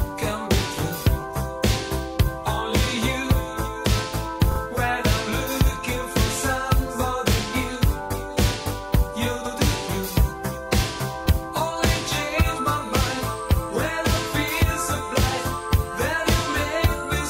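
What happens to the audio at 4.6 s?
Repeated frames cause a brief stutter from 4.51 to 4.60 s. A 40 ms block plays twice more, adding 80 ms.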